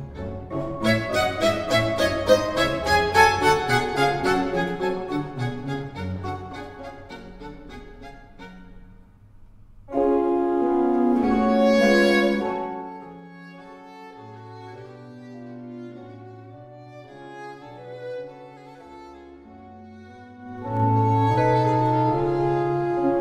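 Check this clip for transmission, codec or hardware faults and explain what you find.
Zipper noise appears twice. From 12.16 to 13.30 s the level drops by around 20 dB. From 20.38 to 20.84 s it rises by a similar amount. Neither gain change is smoothed. Each moves in 2 dB jumps, and each jump puts a small click into the waveform. The first change ticks at around 15 steps a second. The second zips at roughly double that rate.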